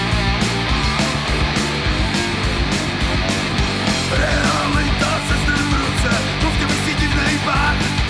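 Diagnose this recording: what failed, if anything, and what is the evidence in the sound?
Nothing failed here.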